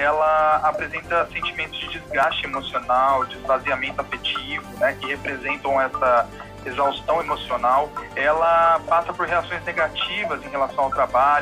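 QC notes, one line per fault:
2.23 s and 7.21 s, audio missing between chunks: two brief skips, about 30 ms gone, edges spliced directly together, likely samples lost at 5-second chunk boundaries.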